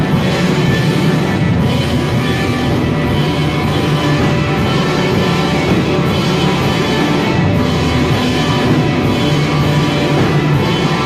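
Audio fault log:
No fault to log.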